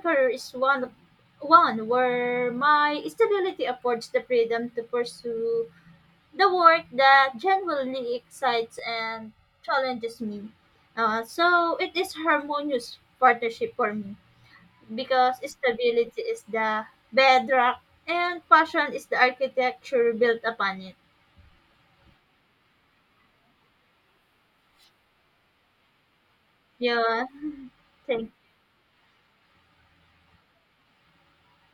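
After "work that genuinely excites", 8.79–10.19 s: channel delay (comb filtering), a lag of about a millisecond and a half, sounds hollow; spectrograms show evenly spaced notches from around 300 Hz.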